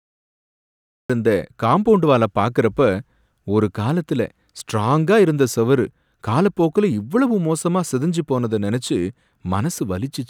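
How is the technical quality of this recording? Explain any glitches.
There's one clear glitch, right at the top. It's a cut-off start: the first 1.10 s is dead digital silence, and then the speech drops in abruptly mid-sound at "இருந்த காம்பவுண்ட்வால" with no natural attack. That points to capture or streaming kicking in late, after the talker had already started.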